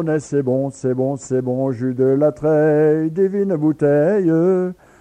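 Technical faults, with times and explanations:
Nothing stood out as a technical problem on listening.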